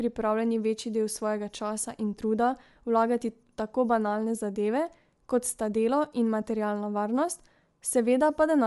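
Throughout, the speech has a breathy, grainy edge and nothing above 11.5 kHz, likely from Bluetooth LC3 compression at a setting consistent with about 48 kbps.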